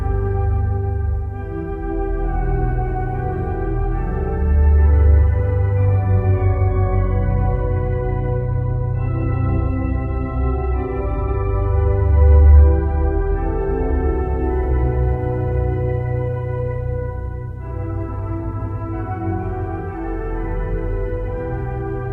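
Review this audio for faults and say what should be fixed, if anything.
From 6.42 s to 14.42 s there's an adaptive stream at a lower bitrate: the treble abruptly turns thin and swirly, with synthetic-sounding highs, then snaps back, with no gap either side. That fits a switch from a 96 kbit/s AAC rendition down to 16 kbit/s HE-AAC when the connection slowed. Give the player a deeper buffer or raise the lowest rung of the bitrate ladder so a brief slowdown doesn't force that rendition.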